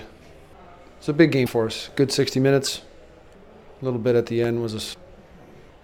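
The audio briefly breaks into a chirp, noise burst or dropout at 1.45–1.48 s, 2.65–2.68 s and 4.93–4.96 s, each about one 26.1 ms frame, likely a broken MP3 bit reservoir after cut frames. A spectrogram shows short broadband smears or gaps, and the waveform shows jumps.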